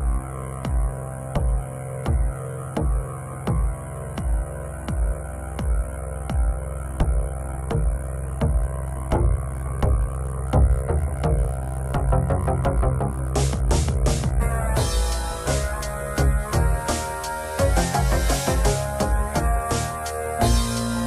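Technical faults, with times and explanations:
Nothing stood out on listening.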